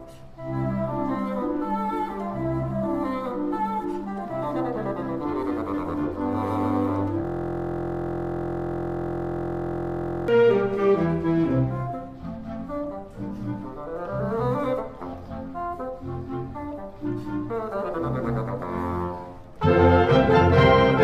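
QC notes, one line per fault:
7.25–10.28 s, system hang loop: the same 23.22 ms slice of audio repeats exactly, some 130 times, which fits a 1024-sample ring buffer being replayed while the computer or driver stalled. Because each cycle is so short, it fuses into a steady buzz at 43.1 Hz rather than a stutter. Unlike mains hum, it carries the timbre of the frozen sound and starts and stops abruptly. Unlike dropouts, the audio never goes silent.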